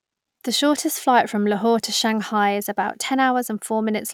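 No technical faults are audible.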